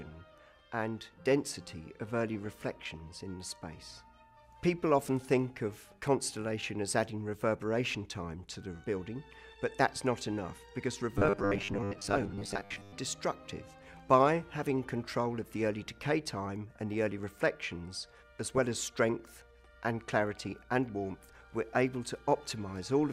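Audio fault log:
2.45–3.00 s, 5.57–5.88 s, 11.58–11.62 s, 15.87–16.09 s and 18.48–18.75 s: DAB burbling. Each burst is a short stretch of burbling laid over the programme. Residual bit errors, at a rate of a few tenths of a percent, slip past the error correction into the MP2 data. Corrupted samples then put short noise blips into individual sub-bands, and corrupted scale factors make sub-bands jump in level for up to a frame, which points to between roughly 10 and 30 damaged frames per burst.
11.18–12.97 s: robotic sound from repeated short buffers. For nearly 1.8 s the audio takes on a rigid, metallic 100 Hz buzz that still loosely tracks the underlying sound. The likely cause is playback starving for data and refilling the gap by replaying the last 10 ms chunk, with around half of the material repeated rather than new. Repeating 10 ms segments imposes the fixed 100 Hz pitch. A brief burbling burst at 11.58 s falls inside this stretch.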